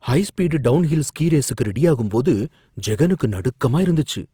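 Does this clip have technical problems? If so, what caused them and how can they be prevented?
Yes. Throughout the speech the tone is grainy and rough, with a noisy edge, though the bandwidth stays full, reaching about 20.3 kHz. The likely cause is Opus compression in its music mode, which fills bit-starved bands with folded or noise content. The sound fits a bitrate near 24 kbps. Encoding at a higher bitrate would prevent it.

There is pre-echo at 2.09 s, just after "ஸ்பீடு டவுன்ஹில் ஸ்கீ ரேசுக்கு". A brief hiss of about 17 ms runs ahead of a sharp onset and softens it. The codec spread its quantisation noise across the whole transform block, so noise sized for the loud attack leaked into the quiet moment before it. Shorter transform blocks at transients, or more bits for them, would prevent it.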